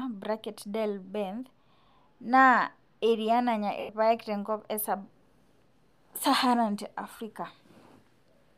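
At 3.80 s (about 90 ms) and 7.17 s (30 ms), lost LE Audio frames were concealed by the decoder replaying the last spectrum with scrambled signs. Both sound like a brief noisy smear. The longer one fades downward, appearing on a spectrogram as blurred, harmonic-free energy tapering away.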